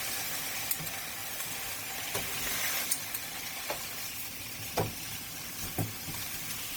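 The sounds show generation loss throughout: swirly, hollow texture and smeared attacks, yet bandwidth reaches 20.1 kHz, unlike single low-bitrate coding. The likely cause is about seven re-encodes, fitting Opus near 48 kbit/s.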